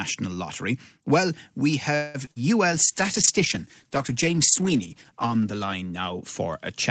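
At 1.95 to 2.30 s, packets most likely stalled in transit and the jitter buffer ran dry. This is a call audio freeze: the last sound stretches into a fading buzz for about 0.19 s, then the audio resumes where it left off.

At the end of that stretch and just after it, at 2.25 to 2.29 s and again at 2.31 to 2.38 s, short concealed packet loss occurs. Roughly 20 ms and 40 ms of audio missed the decoder and were patched by extrapolation, giving brief smeared wobbles.

From 2.73 s to the end, a call bitrate drop cuts Opus from 32 to 10 kbps as the bandwidth estimate falls. The sound turns coarse and watery, staying at the lowest rate for about 2.8 s.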